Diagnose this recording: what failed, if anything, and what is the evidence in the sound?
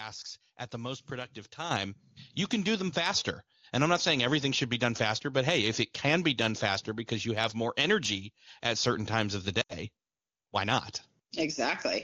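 Call processing stage. At 1.71 s the microphone volume stepped up, about 8 dB. The speech and background jump together, since the input gain was raised in one step.

Network stage, with the codec concealing the damage. From 9.61 to 9.75 s, lost AMR speech frames drop the speech to near silence within two frames. About 80 ms is missing, which fits four 20 ms frames. The decoder repeated the last good parameters at falling gain.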